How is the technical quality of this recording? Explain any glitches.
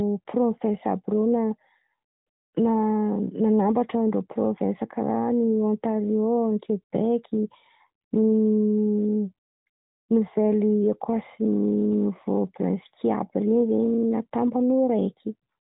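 No glitches are audible; the speech has the band-limited sound of an AMR narrowband mobile call at 12.2 kbps, with nothing above about 3.8 kHz.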